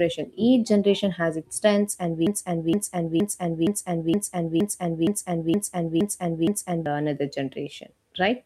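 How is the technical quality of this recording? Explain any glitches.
The recording is marred by one serious glitch. From 2.27 s to 6.86 s, right after "has its strengths and", a broken-record loop takes over: a 0.47 s fragment repeats exactly ten times back to back before the speech resumes at "the another". The speech that belonged in that gap is lost. This likely comes from a stalled player or stream resending its last buffered piece. On a spectrogram or waveform it appears as identical blocks tiled at a fixed spacing.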